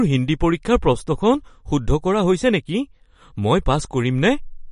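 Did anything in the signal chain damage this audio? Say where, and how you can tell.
Yes. The damage happens at the codec stage and runs through the whole speech clip. Nothing is present above 10.5 kHz, a hard ceiling where the encoder has dropped the treble. The remaining sound is plainly smeared and watery, with a swirling quality on sibilants. This likely comes from MP3 compression at a low rate, around 40 kbps. Short of bits, the encoder discards the top band and lets weak frequency lines flicker between frames.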